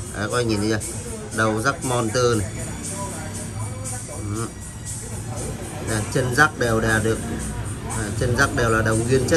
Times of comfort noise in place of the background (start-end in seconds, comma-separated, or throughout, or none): none